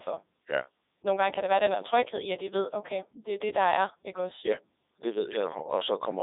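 From start to finish the speech has passed through a Codec 2 vocoder, which carries only pitch, voicing, energy and a rough spectral envelope and rebuilds the voice from sine waves instead of keeping the waveform. The heavy damage fits its highest 3.2 kbit/s mode: speech comes out robotic and buzzy, squeezed into a phone-like band of about 300 Hz to 3.7 kHz, with nothing at all above 3.8 kHz.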